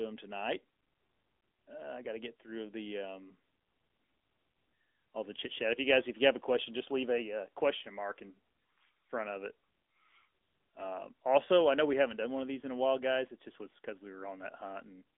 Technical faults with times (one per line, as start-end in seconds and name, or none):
0.00-15.17 AMR narrowband mobile codec